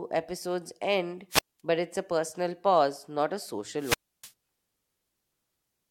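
An analogue wireless microphone's radio signal faded until the receiver squelch muted it: wireless microphone squelch dropout. After "episodes end", 1.30–1.60 s, a hiss burst precedes a 210 ms silent hole before "but it's a personal". After "personal pause not a", 3.78–4.32 s, the hole lasts 300 ms.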